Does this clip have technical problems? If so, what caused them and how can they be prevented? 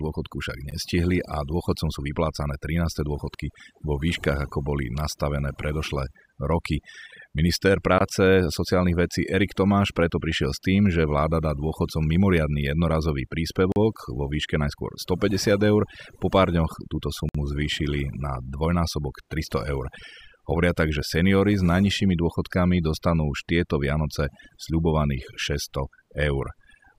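Yes. Throughout the speech, the background has been pushed down and broken up into twinkling, warbling specks. This is overdone noise removal: a noise reduction tool set too strong on a noisy recording cuts individual frequency bands far down or off whenever they sit near its noise estimate, so the remaining noise survives only as isolated flickering fragments, and quiet parts of the voice are pulled down with it. Prevent it by applying gentler reduction, or by recording in a quieter space so less is needed.

The sound also drops briefly to silence four times: at 0.71 s for about 13 ms, at 7.98 s for 22 ms, at 13.72 s for 40 ms, and at 17.29 s for 56 ms, resuming each time after the gap. These are likely Bluetooth stalls, where interference held up packets and the headphones' buffer ran empty, so playback paused until the resent packets arrived. Prevent them by keeping the phone close to the headphones and away from crowded 2.4 GHz interference.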